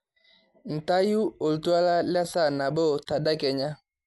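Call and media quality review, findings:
Speech, dull and band-limited throughout, nothing above 11.5 kHz, rough fluttering noise around tonal parts, plainly audible. Likely Dolby Digital compression at a low rate, fitting 64 kbps. Encoder narrows band, starves lines of mantissa bits, decoder fills with dither noise.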